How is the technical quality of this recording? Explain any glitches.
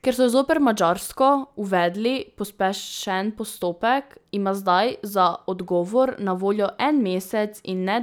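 No glitches or technical faults can be heard in this speech recording. There is nothing in it that calls for an explanation.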